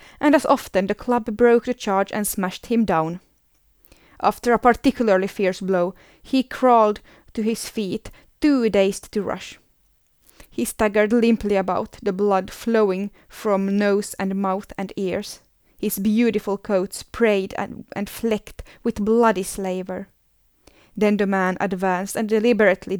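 Nothing technically wrong turns up anywhere in this speech recording, so there's no fault to time or trace back to a cause.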